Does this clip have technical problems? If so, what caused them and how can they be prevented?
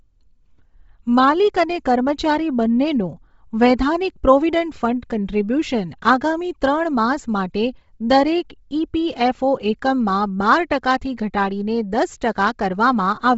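Yes. The whole clip has Bluetooth LC3 compression damage, and it's fairly heavy. Nothing comes through above about 7.7 kHz, and what's left has a breathy, grainy edge where the codec dropped the upper spectrum and filled it with noise. The likely cause is an LE Audio link running LC3 at a low rate, which fits something like 24 kbps with short 7.5 ms frames. To prevent it, raise the LC3 bitrate or record locally rather than over the Bluetooth link.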